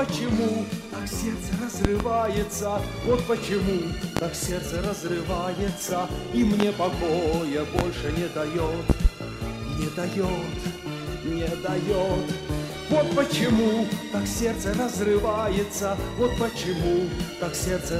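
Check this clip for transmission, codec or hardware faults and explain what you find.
Loud pops occur at 1.85 to 2.04 s (a double pop), 4.17 to 4.20 s, 6.60 to 6.64 s, 7.79 to 7.82 s and 8.90 to 9.08 s (another double). A voltage pulse, likely from a plug, switch, static discharge or driver glitch, lands on the signal and produces sharp thumps about 20 dB above the sound, which continues underneath.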